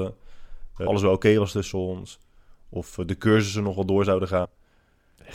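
Speech with two short bursts of damaged data in a compressed stream, at 0.86 s and from 4.44 to 4.46 s: corrupted bytes leave the decoder misreading frames until it resyncs.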